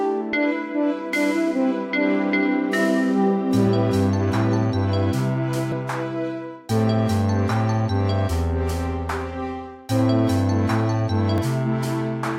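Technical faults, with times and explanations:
5.72 s and 11.38 s: dropped buffer (overrun). A jump ahead of about 40 ms, then about 70 ms. Likely unread samples were overwritten.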